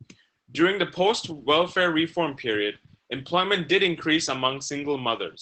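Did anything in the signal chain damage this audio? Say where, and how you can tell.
Yes. Opus voice compression runs throughout the speech, at the codec stage. Nothing reaches above about 8.6 kHz, and the excitation sounds coarsely coded, plainly hoarse and slightly robotic. That fits SILK-mode wideband coding at a low rate, around 12 kbps, where band and detail are sacrificed.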